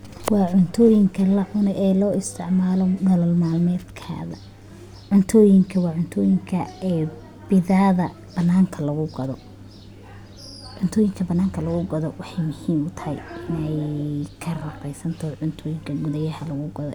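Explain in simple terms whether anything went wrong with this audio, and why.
Nothing went wrong here: the recording runs along steadily with no glitches, gaps or odd noises anywhere in it.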